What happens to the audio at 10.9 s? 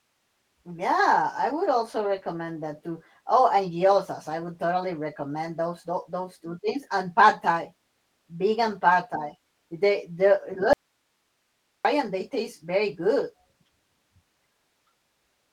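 The speech drops out abruptly at 10.73 s and returns at 11.85 s, a gap of about 1.1 s. During the gap only a faint hiss remains, roughly 50 dB below the speech level. This points to an audio dropout to a faint residue: the signal was likely lost upstream while the path after the break stayed live and carried only its own noise floor. The hard cut in and out, with no decay or gradual return, separates it from a natural pause or a fade.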